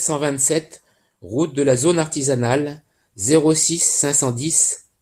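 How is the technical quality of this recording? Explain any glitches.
There are no glitches anywhere in this speech recording. No dropouts, clicks or other transmission or processing faults show up at any point.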